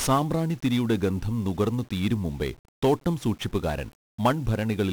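Fuzzy, crackly speech, with a dense broadband hiss sitting over the whole clip and swallowing most of the treble, so sibilants and consonant detail smear into the noise. This is 1-bit DFPWM compression applied throughout: each sample carries only a single bit nudging an adaptive level up or down, and the resulting quantisation error spreads as heavy noise across the spectrum. The damage is severe and fits a rate of around 48 kbps.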